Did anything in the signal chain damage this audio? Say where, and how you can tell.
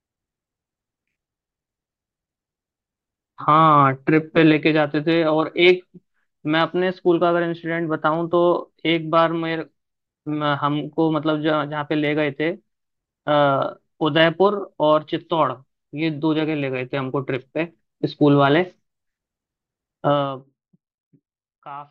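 No, nothing along the chain seems to have hurt this speech recording, so there's nothing to trace back to any stage.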